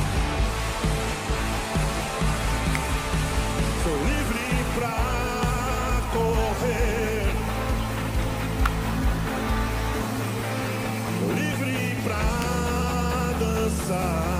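A nearby switch, motor or static discharge likely arced and coupled into the audio line, producing electrical switching spikes at 2.75, 8.66 and 12.42 s. Each is a sharp snap or tight cluster of clicks of about -10 dBFS that sits on top of the sound rather than interrupting it.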